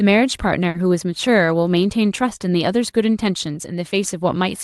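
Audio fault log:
0.69 to 0.75 s, burst of packet loss: a run of lost packets drops about 50 ms of speech. The receiver covers the hole by extending the last decoded sound for about 50 ms and lowering its level as it goes, so the speech smears into a brief held, fading tail. The speech then resumes with the missing stretch skipped, heard through the call path's band limit near 12 kHz.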